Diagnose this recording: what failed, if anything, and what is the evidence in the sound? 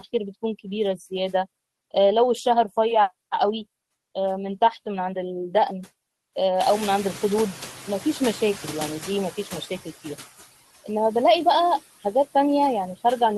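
Noise suppressor artifacts are present throughout, from the call-processing stage. The suppressor cuts the background by about 15 dB, deciding band by band and frame by frame which energy is steady noise. Between phrases the background sinks, and under the speech it swells back, so the residue rises and falls rather than sitting as an even floor.

Noise suppressor catching up runs from 6.6 to 9.76 s, also in call processing. The room noise jumps by about 22 dB around 6.5 s, ending up about 16 dB below the speech. The suppressor's noise estimate still reflects the quieter room, so the louder background passes with only about 10 dB of reduction at first. Over roughly 3.2 s the estimate adapts, and the noise gradually sinks to the deeper suppression level.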